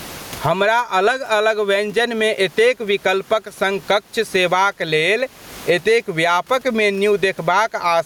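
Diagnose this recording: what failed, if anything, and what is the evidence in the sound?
Gain pumping runs through the whole recording. The room noise sits about 38 dB below the speech, and the gain swings by around 20 dB. Loud and quiet passages sit unnaturally close together, and the speech sounds squashed. The likely cause is input gain set far too high at the microphone stage, with a fast limiter or compressor clamping each peak and releasing between them.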